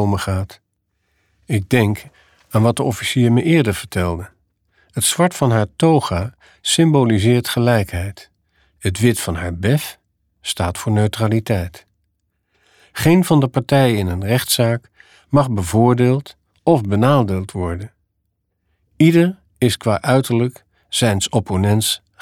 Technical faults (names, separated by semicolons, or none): none